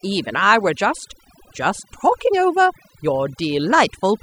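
A short speech recording suffers from overdone noise removal running through its whole length. A noise reduction stage set far too aggressively has gated away any frequency band it judged close to the noise floor, taking quieter voice detail along with it. Between phrases the background collapses to near silence dotted with chirpy, twinkling residue. A spectrogram would show a blotchy, patchwork texture: isolated bins flickering on and off in the gaps, and speech harmonics ragged at their edges.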